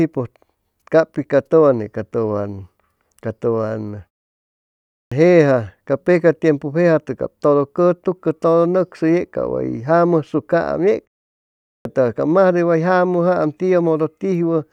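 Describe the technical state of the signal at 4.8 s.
At 4.8 s you're inside a clipped start after a pause: after about 0.67 s of silence the output is still waking, so from 4.69 to 5.12 s roughly 0.43 s of speech onset gets swallowed and it starts abruptly.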